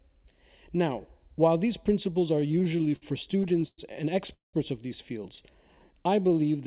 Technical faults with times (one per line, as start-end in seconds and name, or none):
2.36-3.80 repeated stalls (stutter)
4.33-4.55 call audio freeze
5.42-6.59 jitter buffer slow-down